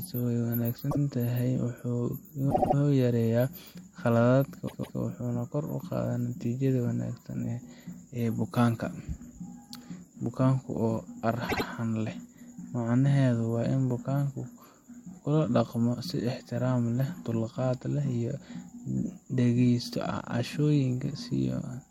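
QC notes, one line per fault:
0.90–0.98 s, 2.50–2.74 s, 4.66–4.98 s, 11.48–11.64 s, repeated frames: short stutters where the same slice of audio replays. The second sits just before "yareeyaa khaladaadka" and the third just after it. The block is 78 ms (157 ms at 4.66 s), replayed once, three times, twice and twice. Compressed frames were duplicated, so the clip gains 78, 235, 314 and 157 ms.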